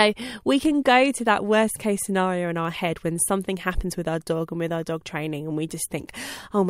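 From 0.52 s to 6.37 s, word clock ticks recur about every half second. The unlocked receiving clock drifts roughly 40 ppm, dropping or repeating single samples.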